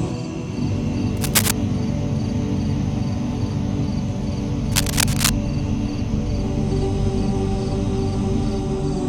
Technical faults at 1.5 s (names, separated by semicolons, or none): cable scratch noise